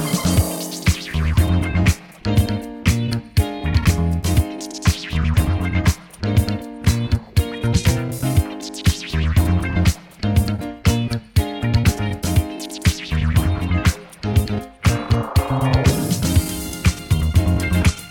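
A tick repeats every half second from about 0.41 s to 17.89 s, dozens of them at a steady rhythm, heard only where the audio carries signal and gone in the gaps. These are periodic USB or driver dropouts: something stalls the USB bus or the audio driver on a fixed 0.5 s cycle, and each time roughly half a millisecond of audio is skipped outright, so the waveform jumps and clicks at every seam.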